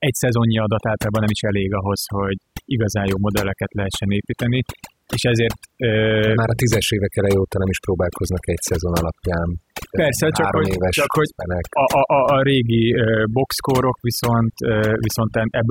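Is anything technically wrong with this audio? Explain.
Yes. Overdone noise removal runs through the whole speech clip. Noise reduction set far too aggressively is suppressing individual frequency bands whenever they sit close to its noise estimate, taking the quieter parts of the voice along with the noise. The background in the pauses drops and breaks up into twinkling specks.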